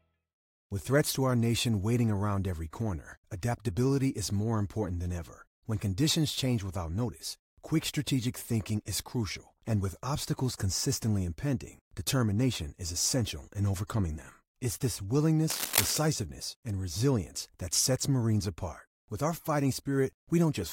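Speech clip with a burst of cable scratch noise from 15.50 to 15.97 s, dense and uneven rustling about as loud as the speech. It is likely a worn lead or connector being moved. Unlike isolated digital clicks, it forms a ragged scrape lasting half a second.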